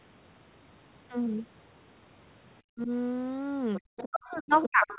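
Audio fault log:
2.70–2.91 s and 4.09–4.98 s, speech suppressed in double talk: the talker's own voice drops by up to about 40 dB, gapping for roughly 150 ms in the first stretch, likely because the echo canceller couldn't separate near and far talkers and attenuated both. Unlike leakage, sound is removed rather than added.
3.75–3.81 s, 3.97–4.09 s and 4.53–4.98 s, other side's voice leaking through: a second voice sits under the talker at about 20, 15 and then 10 dB below it, likely loudspeaker echo the canceller left in the microphone signal. Unlike suppression, an extra voice is added rather than the talker being lost.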